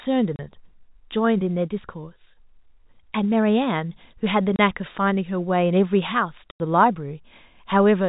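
Packet loss filled with silence hits this speech three times. The receiver had nothing to play for the missing audio and inserted digital silence. The holes fall at 0.36 to 0.39 s and 4.56 to 4.59 s, each 30 ms long, which fits a single lost 30 ms packet, and at 6.51 to 6.60 s, a 90 ms gap that suggests three packets lost in a row. Each hole starts and ends abruptly. The telephone-band G.711 sound stays narrow throughout.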